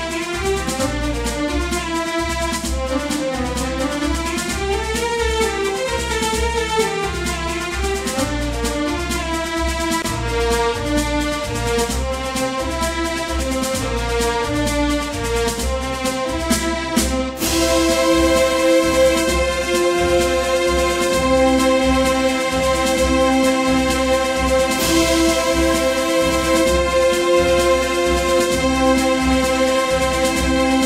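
A brief dropout of about 23 ms opens at 10.02–10.04 s before the audio resumes unchanged: a gap at a join of encoded pieces, where untrimmed encoder delay and padding remain.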